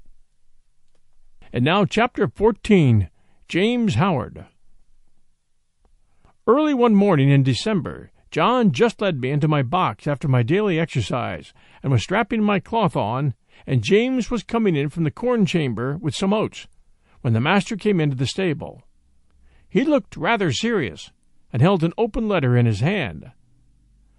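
Throughout the speech there is a watery, swirling quality with smeared consonant attacks and a dulled top end, likely from MP3 compression at a low bitrate, consistent with about 48 kbps. The encoder starves weak frequency lines, which flicker between frames, and trims the treble.

From 3.47 to 3.49 s a short burst of hiss, about 11 dB above the surrounding noise, arrives just ahead of a sharp attack and softens it. This pre-echo fits a transform block of about 48 ms with no switch to short blocks, so quantisation noise spreads before the onset.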